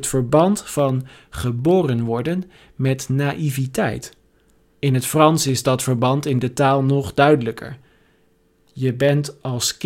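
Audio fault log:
0.10–9.79 s, periodic USB or driver dropouts: about a hundred tiny skips, one every 0.1 s, each removing well under a millisecond of audio as the bus or driver stalls briefly. The splices give regular ticks, heard only while speech is present.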